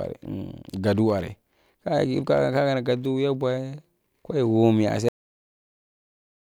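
At 5.09 s the speech stops dead. This is a cut-off end: the final buffers were never written or played out. The sound breaks off mid-utterance and drops straight to digital silence. There is no natural decay. Silence holds to the end.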